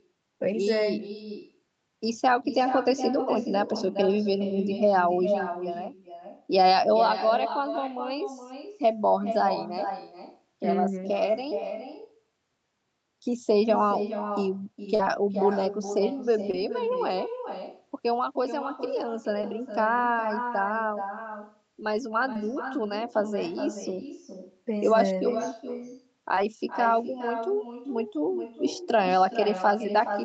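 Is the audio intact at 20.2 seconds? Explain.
No. At 20.2 s, as throughout the clip, there is echo with no canceller. The far end's loudspeaker feeds the microphone, so the speech returns roughly 0.4 s later at about 9 dB lower and thinner. A waveform or spectrogram shows each burst followed by a fainter delayed copy.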